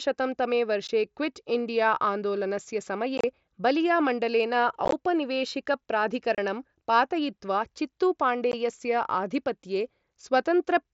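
Unconcealed Bluetooth headset packet loss punches short holes into the speech at 0.87 s, 3.18 to 3.24 s, 4.85 to 4.93 s, 6.35 to 6.38 s and 8.52 s. The lost packets were replaced by silence or an idle pattern, so each gap has abrupt edges. The 3.2 s and 4.9 s events are scattered bursts that sound like brief crackle.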